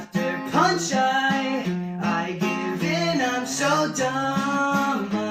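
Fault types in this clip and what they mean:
Clock drift between sender and receiver: throughout the clip, the sender's clock runs roughly 4 percent fast against the receiver's. Audio piles up in the jitter buffer, so the receiver keeps discarding short pieces, heard as small hiccups at uneven intervals.
Repeated timing corrections: from 0.04 s to 5.31 s, the receiver trims short fragments again and again, always in the same direction, so the sound effectively plays at 104 percent speed. The cuts are unevenly spaced, and each one is small.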